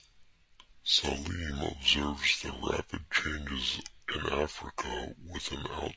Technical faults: wrong sample rate

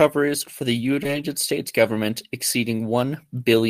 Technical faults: short concealed packet loss

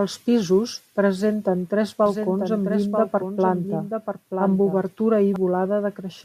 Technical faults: doubled audio track

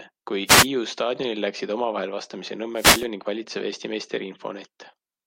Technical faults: wireless microphone noise hit

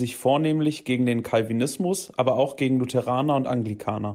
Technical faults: none

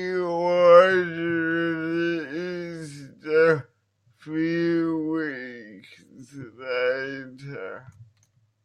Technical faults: none

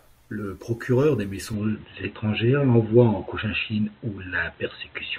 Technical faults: input switched to a poorer device

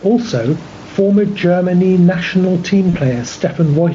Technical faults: gain pumping; VoIP packet loss concealed by the speech codec

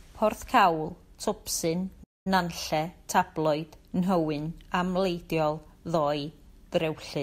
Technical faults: playback stall

